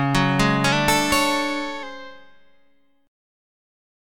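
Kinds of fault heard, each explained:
Drift correction step: from 0.72 to 1.83 s the sound runs 6.1% fast and rises 102 cents, about a semitone, then snaps back. The likely cause is a clock-matching resampler jumping its rate once. Unlike wow, which wavers continuously, this holds one fixed offset.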